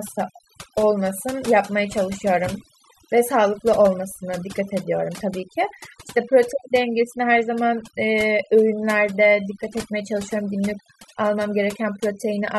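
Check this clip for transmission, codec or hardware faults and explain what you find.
The clip has one fault, present throughout: overdone noise removal. An over-aggressive noise reducer mutes bands near its noise estimate, leaving near-silent gaps with twinkling specks.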